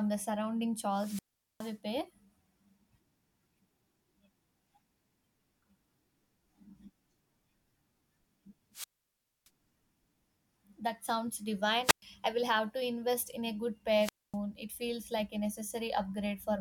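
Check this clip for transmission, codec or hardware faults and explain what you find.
The speech has four wireless microphone squelch dropouts, at 0.92–1.77 s, 8.72–9.50 s, 11.82–12.03 s and 13.99–14.37 s. The analogue FM link fades, hiss rises, then the receiver's squelch mutes output for 0.42, 0.62, 0.11 and 0.25 s before the signal returns.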